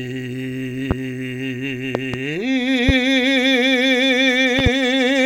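Loud pops hit this music clip at 0.91 s and 2.89 s as single pops, and at 1.95–2.17 s and 4.59–4.69 s as quick pairs, each about 15 dB above the music, which continues underneath. They likely come from sudden voltage pulses from a plug, switch, static or driver glitch, shaped by the following circuitry into sharp thumps.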